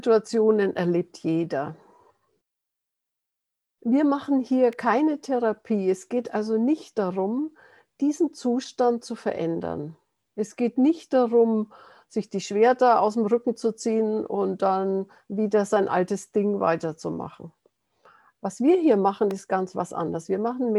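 Two sharp, isolated snaps sit on top of the audio at 4.73 s and 19.31 s, the second slightly stronger, each a few milliseconds long, likely an electrical switching spike from nearby equipment. Unlike a dropout click, the underlying sound continues uninterrupted beneath each snap.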